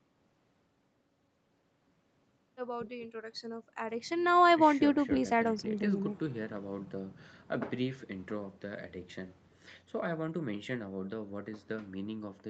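Nothing goes wrong anywhere in this speech, which simply carries the sound of a normal call path, with nothing heard above about 8 kHz, a top end that fits an Opus connection at around 32 kbps.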